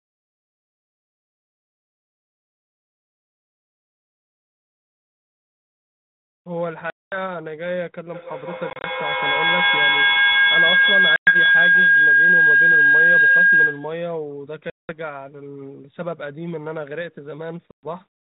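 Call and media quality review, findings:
Packet loss on an ADPCM call. Hard-edged silent holes at 6.90–7.18 s (220 ms lost), 8.70–8.87 s (80 ms in short runs of up to 30 ms, over 140 ms), 11.16–11.36 s (110 ms), 14.70–14.92 s (190 ms), 17.71–17.86 s (120 ms). Component: network path into the G.726 decoder. Mechanism: missing packets zero-filled, so the decoder's predictor and step size drift from the sender's. Distinguishing sign: speech resumes with some distortion, settling within tens of ms. A clean dropout would resume cleanly.

Feedback howl. 8.12–14.12 s, rising to about 12 dB above the speech and narrowing to a tone near 1.5 kHz, with a loop delay of roughly 150 ms. Component: acoustic loop between two devices in one room on the same call. Mechanism: the loop gain exceeds unity, so each pass adds level. Distinguishing sign: unlike a steady interfering tone, it grows, often pulses at the loop delay and stops abruptly when the loop is broken. 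The 8.70 s packet loss falls inside it. The 32 kbit/s G.726 path carries nothing above 4 kHz.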